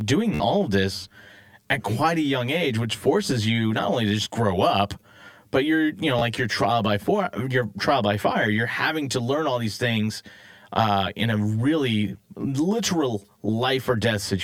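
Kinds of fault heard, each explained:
Channel delay (comb filtering): The speech sounds hollow and phasey throughout, with fixed notches in the spectrum starting at roughly 50 Hz and repeating evenly upward. One channel runs about 10 ms behind the other, so when the two are summed to mono their shared content cancels at those spaced frequencies.
Bluetooth stutter: Two brief repeats break the speech, at 0.34 to 0.40 s and at 6.19 to 6.22 s. Audio packets arrived late or not at all, so the receiver replayed its last short slice until fresh data came, skipping about 53 ms and then 27 ms.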